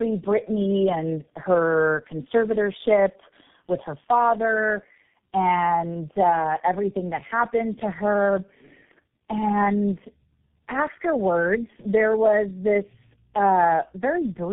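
Tandem speech coding runs throughout. Three low-rate speech codecs in a row each recoded the last one's output. Speech sounds rough, muffled and warbly, with nothing above 3.8 kHz.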